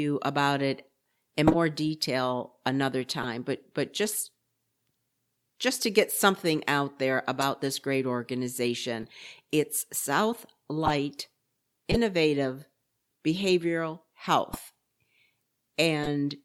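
Speech is hit by short bursts of corrupt frame decoded damage at 1.47, 3.23, 7.41, 9.01, 10.85, 11.91, 14.53 and 16.03 s. Each lasts about 40 to 80 ms. Bits in the compressed stream were flipped, and the decoder played those frames anyway. Energy lands at the wrong frequencies, heard as chirps and noisy blips. The loudest, at 1.47 s, peaks near -5 dBFS and spans several frames. The faintest, at 9.01 s, sits around -30 dBFS.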